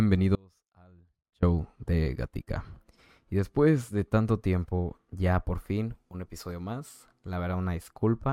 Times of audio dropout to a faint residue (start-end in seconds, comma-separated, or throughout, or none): 0.35-1.43